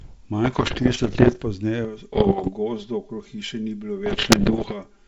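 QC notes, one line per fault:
0.44–1.44 s, 2.13–2.51 s, 4.06–4.74 s: bit errors on the ADPCM link. Corrupted codes derail the decoder's step size and predictor, causing pops, rough bursts and level jumps. They show as spiky waveform clusters and broadband spectrogram streaks, heaviest in the last burst.
1.85 s to end: channel delay (comb filtering). One channel lags the other by about 5 ms before the mono sum, producing a hollow, phasey sound. The spectrogram shows fixed horizontal notches from about 100 Hz, spaced about 200 Hz.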